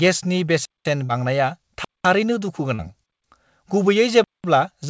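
At 0.65 s the speech drops into a 200 ms hole with hard edges, the first gap between chunks. The same gap returns at 1.85, 3.04 and 4.24 s, after every 1 s stretch of audio. On a waveform each one is a flat, near-silent stretch with sheer walls. On a spectrogram it is a blank vertical band.

At 1.06 s comes a short concealed packet loss. About 40 ms never arrived, and the decoder extended the preceding sound for roughly 32 ms to cover it, leaving a brief smear. A second one at 2.75 s is filled for about 35 ms. The spectrogram shows a frozen, slightly blurred patch rather than a gap, and all of it sits under the 8 kHz ceiling of the G.722 call path.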